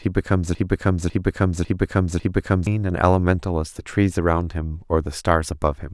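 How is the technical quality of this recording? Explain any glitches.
The recording opens with a clear glitch. From the very start to about 2.67 s, a broken-record loop is already under way. A fragment of speech about 0.55 s long repeats exactly, back to back, four times. It sounds like a stuck, stuttering replay of the same sliver. The likely cause is a stalled player, encoder or stream that kept resending the last fragment it held. Whatever speech belonged in those seconds is lost.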